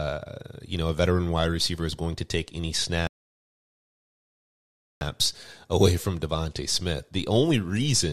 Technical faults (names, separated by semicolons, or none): rebuffering stall